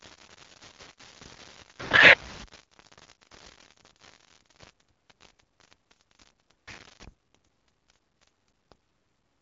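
Low bit depth without dither runs throughout, likely from rounding to about 7 bits, so a gritty, signal-following grain sits roughly 20 dB below the speech, harshest on quiet passages.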